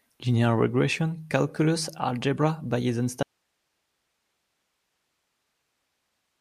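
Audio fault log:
3.23–6.41 s, audio dropout to a faint residue: the speech cuts off abruptly mid-flow and never returns, leaving only hiss around 50 dB below the signal, likely a lost feed with the downstream path still live. The instant cut distinguishes it from a pause or fade.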